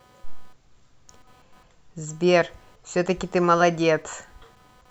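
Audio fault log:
throughout, computer activity noise: A faint buzzing chirp sits under the speech for the whole clip. It pulses at around 300 times a second. It sits roughly 35 dB below the speech. The noise does not rise and fall with the talking. It follows the computer instead. Shifting load in the processor, graphics card or mouse moves the ground that the audio circuit shares. That wandering ground leaks into the signal as this pulsing buzz.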